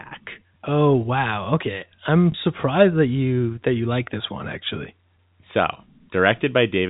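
At 2.32 to 2.34 s, between "okay I'm" and "surprised that you that", there is a brief packet loss with the last packet repeated. About 20 ms of audio went missing. The receiver filled the gap by replaying the previous chunk of sound. That fits a single lost 20 ms packet. It comes across as a small blip in the speech. The line has a G.711 telephone band, with nothing above 4 kHz.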